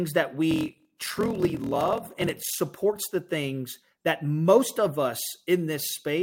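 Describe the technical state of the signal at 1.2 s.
Block size mismatch (padded), 0.49–2.59 s: short blocks, fitting 1024 samples, are zero-filled, adding a 41.7 Hz buzz and slowing speech to 0.889 speed.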